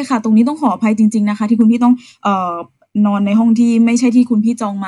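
A brief crackly roughness rides on the peaks of the speech from 0.40 to 0.67 s, and again from 1.61 to 1.87 s. Both are hard clipping: the signal ran about 1 dB past what a stage in the chain could pass, so its loudest peaks were sliced flat. Those squared-off tops add high harmonics, which is why the overload is heard as crackle on peaks rather than a continuous fuzz.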